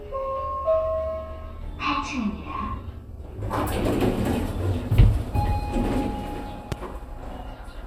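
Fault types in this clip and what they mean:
Loud pop: two single sharp pops land at about 5.03 and 6.72 s, each lasting around 25 ms and jumping well above the surrounding sound, which keeps going underneath. That's the signature of a brief voltage spike, likely from a switch, plug or static discharge.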